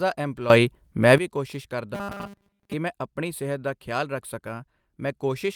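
A sudden gain jump runs from 0.5 to 1.18 s. The level steps up by about 14 dB at once and drops back just as abruptly, with sound and background noise shifting together. It is likely a digital gain change applied from one sample to the next without any ramp.

Robotic sound from repeated short buffers follows from 1.95 to 2.73 s, ending just before "ਮੈਂ ਆਪਣੀ ਸਿਹਤ ਦਾ". The speech becomes a rigid metallic buzz at 200 Hz, which fits a 5 ms fragment being looped. The likely cause is audio arriving too seldom, so most of this stretch is repeats while the real signal is skipped.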